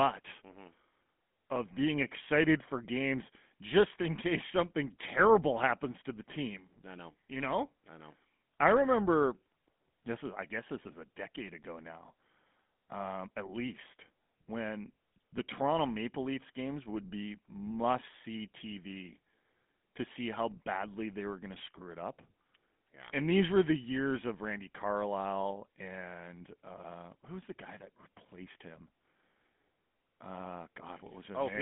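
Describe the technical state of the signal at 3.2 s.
GSM full-rate codec damage is present at 3.2 s, as it is throughout the speech. The codec models the vocal tract and drives it with sparse, regularly spaced pulses, a coarse scheme consistent with its 13 kbps rate. This gives a plainly audible buzzy, gravelly roughness, with the line band limited to 150 Hz to 3.5 kHz and nothing above 3.8 kHz.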